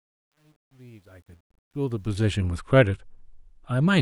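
Speech fading in from the start has truncation distortion on a fade from 0.0 to 2.42 s, worst up to 1.47 s. The quiet opening turns gritty, which fits a stage keeping about 10 bits without dither. A noise gate would cut cleanly rather than grind.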